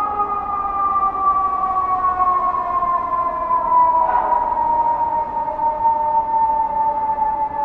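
Nothing in this recording of sounds stood out as a technical problem on listening.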